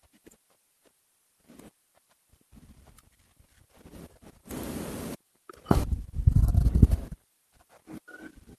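At 4.06 s there's a skip ahead. Roughly a fifth of a second of speech got dropped while later audio was already queued, and playback just jumps forward with nothing filling the gap, so the two sides butt together abruptly.

Then from 5.15 to 5.57 s you get a jitter buffer speed-up. The buffer was holding too much, so the receiver trimmed out short pitch-period chunks, around 50 ms in total. The speech runs at about 111% speed, same pitch, and sounds a bit rushed.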